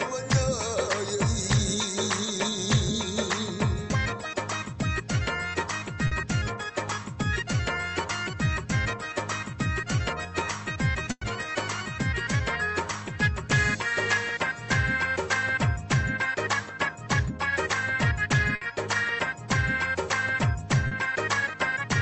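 Packets arriving too late for the decoder twice caused short concealed packet loss, at 6.07 to 6.13 s and 20.87 to 20.93 s. Each time the receiver invented about 40 ms by extending the preceding sound, heard as a brief smear or wobble where that stretch of audio is missing. Two bursts of packet loss left longer holes. At 11.11 to 11.23 s, 100 ms was concealed, with the stretched sound fading until about 40 ms of silence before playback resumed further along. At 18.55 to 18.63 s, a 60 ms gap became a short held buzz or hiss. All of this passed through a WebRTC call path, whose coding noise and top end near 8 kHz fit Opus at a modest bitrate.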